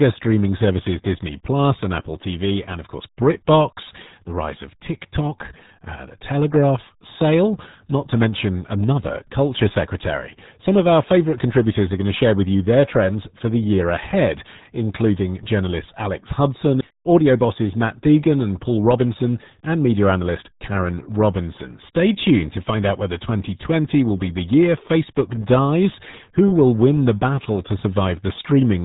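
The speech has been squeezed through the RealAudio 14.4 codec, the old dial-up RealAudio 1 scheme, and the heavy coding damage points to a bitrate around 8 kbit/s. At that rate the codec discards everything above about 3.8 kHz and models the rest coarsely, so for the whole clip the voice sounds muffled and boxy, sibilants lose their edge, and vowels take on a gargly, watery texture.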